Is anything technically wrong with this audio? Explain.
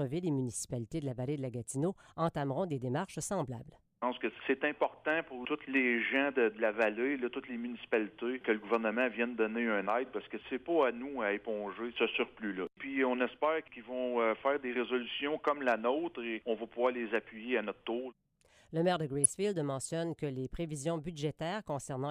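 Yes. From 19.24 to 19.26 s there is a brief burst of DAB burbling. A weak DAB signal let a small fraction of bit errors, roughly 0.15 percent, slip past error correction into the MP2 stream. Corrupted samples put short blips of noise in single sub-bands, heard as a short burst of burbling over the sound. The burst hit four frames. A spectrogram shows isolated rectangular blocks of energy in separate frequency bands. The waveform shows an irregular disturbance.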